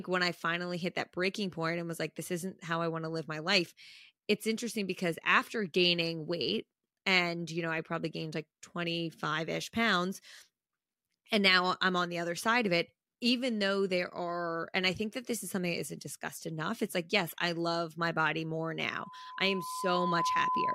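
At 18.91 s a loudspeaker feedback squeal begins. The microphone is picking up the loudspeaker it feeds, and at 1 kHz the loop gain has gone past one, so that frequency reinforces itself on every pass. A pure tone at 1 kHz swells out of the speech over about a second and a half until it sits at roughly the same level as the speech, and it is still sounding when the clip ends at 20.74 s.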